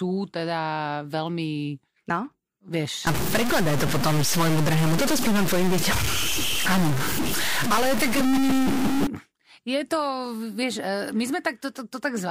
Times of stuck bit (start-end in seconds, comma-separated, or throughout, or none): 3.07-9.07